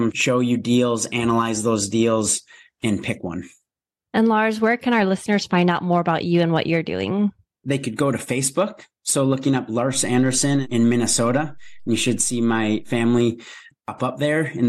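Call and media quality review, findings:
DC step, 9.94 s to 13.18 s. Low thump at onset, second thump as offset returns. Speech continues unchanged through both. Probable component: ADC recalibration or offset-carrying input switched into path. Mechanism: zero line jumps about -35 dBFS, holds 3.2 s, steps back. Waveform: baseline visibly shifted off zero for that span. Spectrogram: brief vertical broadband lines at both edges, energy concentrated at lowest frequencies.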